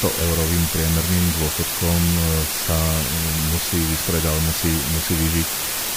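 A constant, even hiss runs through the whole speech recording, roughly as loud as the speech itself, with no grinding distortion. This is low bit depth with dither: the audio has only 3 bits, and noise added before rounding turns the coarse steps into steady white noise.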